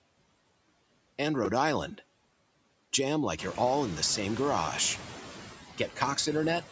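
Throughout the speech the background noise drops away between phrases and comes back underneath them, more noticeably once the room noise grows louder around 3.5 s. These are noise suppressor artifacts: the suppressor pulls steady noise down by about 17 dB.

At 4.13 s, right after "you're all in the", a tiny buzzy click appears. This is a repeated buffer. New audio arrived late, so a 2.67 ms block, which fits a 128-sample buffer, was played three extra times with hard joins.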